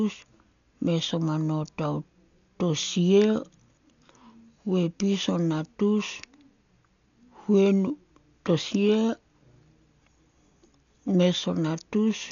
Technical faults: Dolby Digital compression

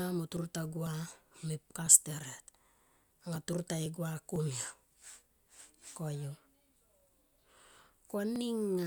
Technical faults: periodic USB or driver dropouts

